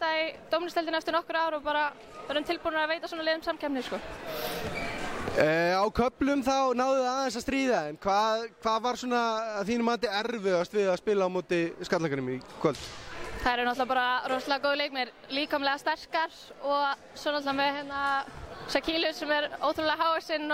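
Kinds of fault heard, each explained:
Drift correction step: playback likely jumped rate to rebalance a clock-matching buffer, so the sound runs about 6% fast and a semitone sharp at 6.35–7.96 s and 15.94–17.45 s, and slow and flat at 10.07–10.63 s. On a spectrogram the harmonics shift as a block, then snap back.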